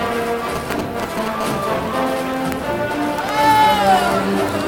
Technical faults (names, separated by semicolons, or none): GSM signalling bursts; GSM phone buzz